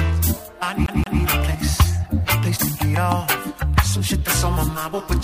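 At 0.86 s the audio catches on a CD stuck on one turn: a 173 ms slice plays twice through to 1.21 s, with a tiny mute at each jump. That's the laser getting knocked back a track by a scratch, giving that quick, even skipping stutter.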